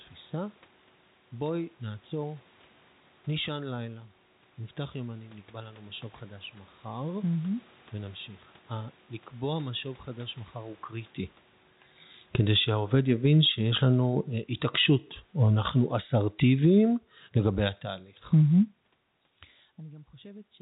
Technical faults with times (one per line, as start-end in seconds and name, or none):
12.20-18.83 automatic gain falling
19.81-20.62 automatic gain rising